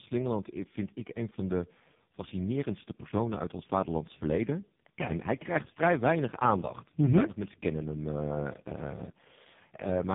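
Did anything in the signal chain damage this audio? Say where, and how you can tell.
Yes. The damage is at the codec stage: tandem speech coding across the whole clip. Nothing survives above 3.7 kHz. The speech sounds rough, muffled and warbly. That points to roughly three speech coders in series, likely ending in a low-rate AMR-NB mode, each re-coding the previous coder's artefacts.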